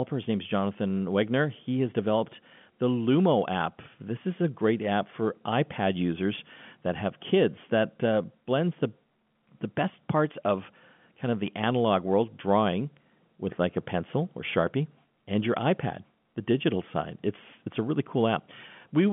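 No technical faults can be heard anywhere in the speech.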